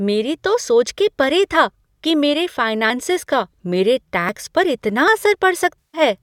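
Small jumps occur at 0.64 s after "मेरी तो", 2.90 s before "का मेरे", 4.29 s after "का मेरे", and 5.08 s. Each skips about 20 ms, likely a dropped buffer (overrun).

From 5.79 to 6.01 s, AAC frame loss with concealment smears about 150 ms. The decoder fills the gap from earlier spectra, producing a noisy, phasey patch.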